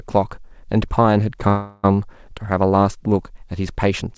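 At 1.48 s the speech stalls in a call audio freeze that lasts until 1.85 s. The last sound is held as a fading buzz or hiss for about 0.36 s. Nothing is lost. The speech then resumes where it stopped, that much later. Packets were likely delayed in transit, so the jitter buffer ran empty. Throughout, nothing is heard above 8 kHz, which fits a G.722 call path.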